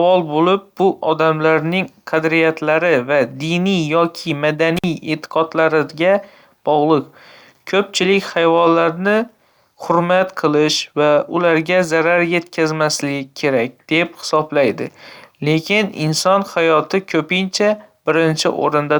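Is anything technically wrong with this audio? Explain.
Yes. From 4.77 to 4.84 s the speech suffers an intermittent contact: a loose plug or cable connection briefly parts, breaking the signal path for about 50 ms. The sound drops out abruptly with crackle at both edges, leaving faint hiss during the gap.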